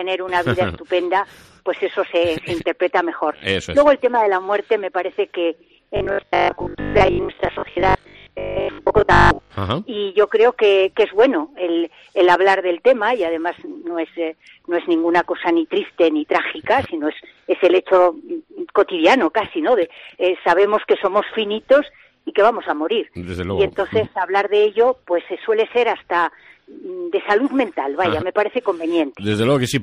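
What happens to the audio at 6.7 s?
At 6.7 s new audio is likely arriving too seldom, so the playback keeps repeating its last 20 ms chunk for about half the time and skips real audio. That is robotic sound from repeated short buffers, from 5.97 to 9.51 s, a rigid metallic 50 Hz buzz.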